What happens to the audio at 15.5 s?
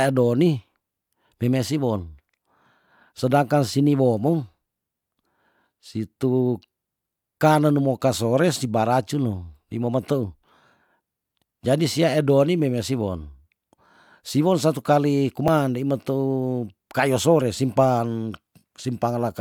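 At 15.48 s, right after "siwon satu kali" and just before "ndei meteu", there's a quick jump where the speech skips forward with no gap. That's most likely a dropped buffer (overrun): a tiny chunk, around 10 ms, got overwritten before capture, and the two sides were spliced together.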